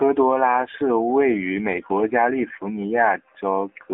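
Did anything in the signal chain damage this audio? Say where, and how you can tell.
Yes, at the codec stage. AMR narrowband mobile codec damage runs throughout: the speech is buzzy and synthetic, which fits a low AMR-NB mode near 7.4 kbps. A spectrogram shows energy confined to about 250 Hz to 3.6 kHz, with a hard empty ceiling above.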